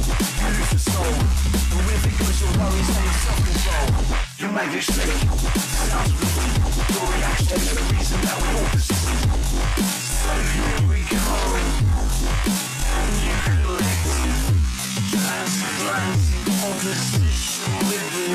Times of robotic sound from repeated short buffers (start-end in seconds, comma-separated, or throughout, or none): none